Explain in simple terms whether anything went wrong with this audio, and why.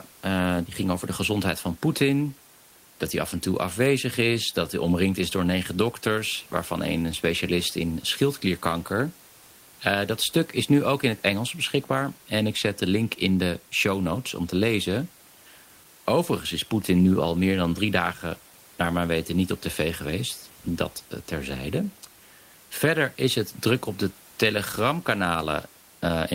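Nothing went wrong here: the speech comes across as it was recorded, and the faint background sound you might notice is just the quiet noise of the room, sitting far below the talking.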